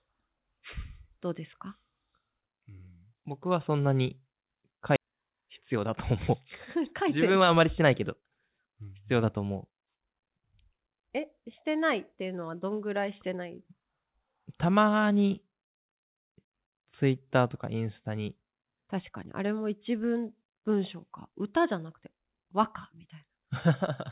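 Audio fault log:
4.96–4.98 s, skip ahead: playback just jumps forward here with no gap at all, and roughly a second and a half of speech is gone. A stretch of audio was dropped, either in transit or by the jitter buffer throwing it away on overflow, while later audio was already queued, so the two sides of the missing chunk get butted straight together. It sounds like a clean cut rather than a dropout.
5.05–6.31 s and 6.76–9.77 s, jitter buffer speed-up: the buffer is holding more audio than it wants, so the receiver trims short pitch-period-sized slices over and over to claw the delay back. The first run goes at 106%, removing roughly 70 ms, and sounds a bit hurried. The second is stronger, at 118% and about half a second removed, so it's clearly rushed, though the pitch stays put. Through all of it the band tops out at 4 kHz, which fits G.711 mu-law on a call path.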